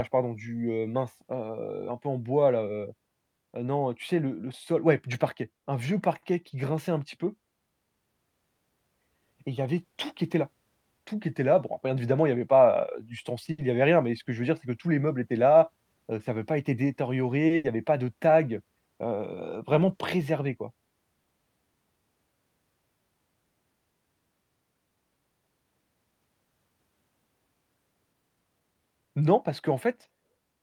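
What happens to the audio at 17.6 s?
At 17.47–17.52 s a short stall from a late packet holds the sound for about 30 ms until the packet arrives. Nothing is skipped. Then at 17.56–17.66 s a burst of packet loss conceals 80 ms with a fading continuation, and that 80 ms of audio is gone when playback resumes.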